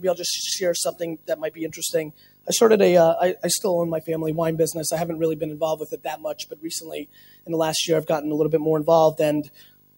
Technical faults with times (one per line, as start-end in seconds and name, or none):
0.00-9.97 video or display buzz
0.00-9.97 noise suppressor applied to music or sounds
0.92-1.79 sound cut by the noise suppressor
2.04-2.47 sound cut by the noise suppressor
5.80-7.50 sound cut by the noise suppressor
9.43-9.97 sound cut by the noise suppressor